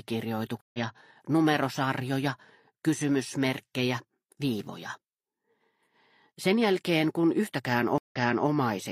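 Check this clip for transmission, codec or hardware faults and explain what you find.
Two stream reconnects. At 0.61 to 0.79 s, about 130 ms of silence; sound resumes roughly 150 ms ahead. At 7.98 to 8.48 s, 132 ms of silence, then a 372 ms repeat. Each time the connection dropped and a fresh decoder restarted mid-stream.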